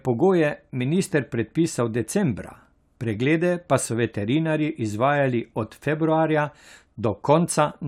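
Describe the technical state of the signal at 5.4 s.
At 5.4 s the speech signal is intact, with no audible fault at that moment.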